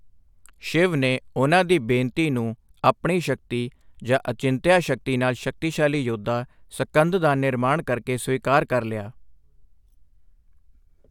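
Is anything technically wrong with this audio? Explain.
No, nothing is technically wrong with this audio.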